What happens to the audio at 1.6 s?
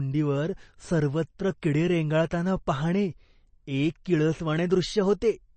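A brief smear of hiss lands just ahead of a sharp attack at about 1.62 s, softening its onset. This is pre-echo. The codec spread its quantisation noise across the whole transform block, so noise meant for the loud attack also filled the quiet 10 ms before it. Underneath, the speech has a watery, swirly texture and nothing above 8.3 kHz. That is plainly audible MP3 compression, likely from a very low bitrate such as 32 kbps, where the encoder cut the treble and let weak frequency lines flicker between frames.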